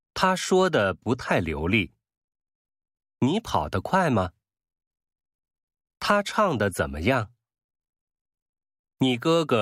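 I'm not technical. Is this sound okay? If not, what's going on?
Yes, nothing in this speech recording points to a technical fault.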